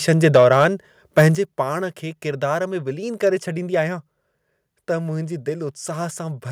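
Microphone overload from 0.24 to 0.64 s flattens the loudest speech peaks and gives them a harsh, crackling edge. The peaks push about 6 dB past the converter's limit, likely because the input volume was set too high for the converter.

Inside that stretch, at 0.36 s, a microphone volume step-down drops voice and background together by about 3 dB in a single jump. This is likely the call software lowering the device's input volume after detecting clipping.

Overload returns from 1.18 to 1.26 s at about 4 dB over, with a few percent of samples cut off. At 1.35 s, just after those distorted peaks, the level steps down again in one abrupt move, this time by about 8 dB.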